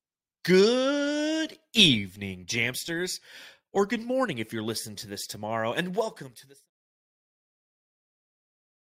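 No technical faults are audible.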